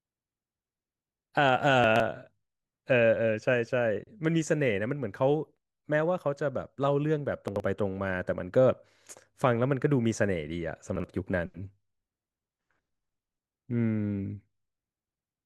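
Chunks out of order garble the speech three times, at 1.84 to 2.0 s, 7.48 to 7.6 s and 10.96 to 11.04 s. In each case a 40 ms block plays late, three, two and then one block behind its place, so nothing is lost but the sound jumps. On a waveform each spot shows abrupt steps at three joins. A spectrogram shows vertical broadband lines there and formant tracks that break and resume out of sequence.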